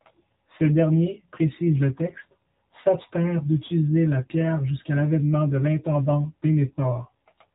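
Throughout the clip the speech carries AMR narrowband mobile codec coding. Everything above 4 kHz is gone, so consonants sound dull and boxy. The vocal-tract model, driven by only a few pulses per subframe, leaves a buzzy, synthetic edge on the voice. The damage is plainly audible, and the low bit budget points to AMR-NB's 7.4 kbps mode. Any background becomes a swirling warble rather than a steady bed.

From 2.06 to 2.23 s, just after "derniers précise le" and before "s'abstinrent d'utiliser la pierre", AMR bit errors corrupt the stream. The less protected bits arrived flipped, so excitation pulses land in the wrong places and the fine gain and spectral values go wrong. Pitch and loudness roughly hold, but the voice turns hoarse, scratchy and gargly. The span fits about nine damaged 20 ms frames at an error rate of around 4 percent.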